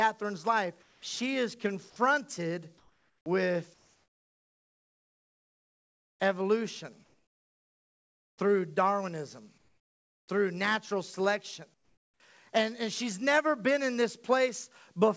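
In the pauses the real room tone drops out and is replaced by a flat, featureless hiss that sits lower than the background it displaces. This happens at 0.82 to 1.02 s (about 3 dB quieter), 2.78 to 3.26 s right after "life she is confronted" (about 5 dB), 3.74 to 6.20 s (about 6 dB), 7.04 to 8.38 s (about 8 dB), 9.58 to 10.28 s just before "through natural selection" (about 7 dB), and 11.74 to 12.20 s just after "through natural selection" (about 12 dB). This is comfort noise in place of the background, most likely from discontinuous transmission. The sender stops sending once its detector judges the gap silent, and the receiver synthesises a smooth, roughly matched noise until sound resumes. The background sits about 36 to 46 dB below the loud passages.

At 3.24 s the sound re-enters hard, with no soft lead-in, as the first 20 ms are missing. This is an onset clipped by the voice detector. 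The detector was likely slow to register that sound had restarted, so that opening sliver was never sent and the receiver filled it with comfort noise. Throughout, nothing is heard above 8 kHz, which fits a G.722 call path.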